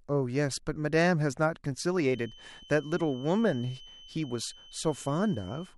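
From 2.0 s to the end, a feedback whistle sits at 3 kHz, well below the speech. It is likely a speaker-to-microphone loop held just short of runaway.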